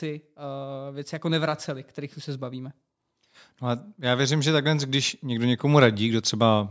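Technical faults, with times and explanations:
0.05–2.80 s and 3.60–6.66 s, automatic gain rising: the gain control lifts a too-quiet input, swelling speech and background together by about 5 dB, then about 7 dB; the waveform envelope ramps upward.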